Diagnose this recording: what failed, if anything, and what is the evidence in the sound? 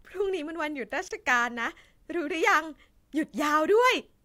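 At 1.08 s the speech drops out for about 27 ms, a brief hole with smeared edges, and at 1.11 s it resumes from where it left off with nothing lost. That points to a gap at a join of encoded pieces, at the codec stage: two separately encoded segments were spliced untrimmed, so the first segment's padded final frame and the second's encoder start-up silence both remain as dead air.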